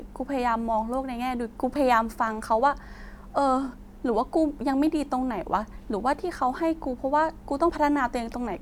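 At 1.76, 5.72 and 7.70 s, the speech skips forward by about 20 ms, likely audio missing between chunks of 2 s; waveforms show abrupt butt-joins, spectrograms thin vertical seams.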